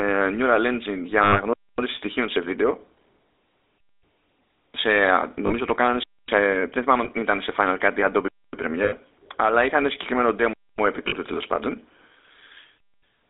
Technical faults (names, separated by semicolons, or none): GSM full-rate codec; lost GSM frames